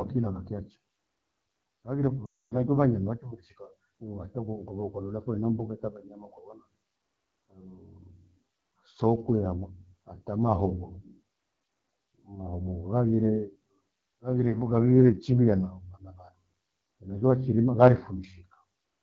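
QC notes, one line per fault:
Throughout: AMR wideband (HD Voice) codec, plainly audible. The speech has a rough, raspy edge. That fits one of AMR-WB's two lowest rates, near 8.85 kbit/s, where the pulse-excited vocal tract model is coarsely quantised and 6.4 to 7 kHz is synthetic noise.
2.25 to 2.61 s: lost AMR speech frames, about 260 ms, just before "manya maake". The decoder repeats the last good pitch and vocal tract settings at falling gain, so the sound smears, fades quickly toward silence, then resumes weak or rough.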